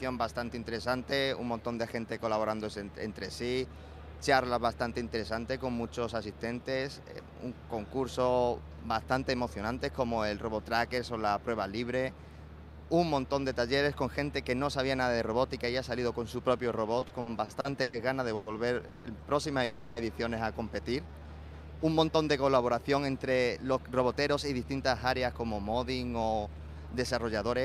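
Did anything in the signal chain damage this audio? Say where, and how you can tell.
Yes, the damage is all on the network side, in how the receiver's jitter buffer coped with uneven packet arrival, and it's concentrated in the last ten seconds.

From 16.99 to 19.07 s you get repeated stalls, a proper stutter. There are eight little hold-ups, the longest about 160 ms, and together they fill roughly 550 ms, about a quarter of that stretch. Each time the buffer ran dry the receiver just kept the last sound going until packets caught up, so nothing's lost, but it drags and hiccups.

Then there's a call audio freeze from 19.64 to 19.99 s. For about 320 ms the sound hangs, the last bit stretched into a fading buzz or hiss rather than dropping to silence, and then it picks up exactly where it left off. So it's a 320 ms gap inserted, not missing audio, and the likely cause is packets held up en route long enough to empty the buffer outright.

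At 21.03 to 21.28 s there's a brief jitter buffer slow-down. The receiver repeated single pitch periods to rebuild its reserve, adding about 67 ms, so that quarter-second plays at roughly 77% speed. You hear it drawn out, but the pitch doesn't drop, which is the giveaway that it's time-stretching, not resampling.

Finally, from 22.89 s to 27.57 s it's a jitter buffer speed-up: the buffer had overfilled, probably from that late burst, so the receiver trimmed pitch-period-sized slices throughout, around 400 ms in all. That runs the tail at about 108% speed, same pitch, with a slightly hurried, rushed feel.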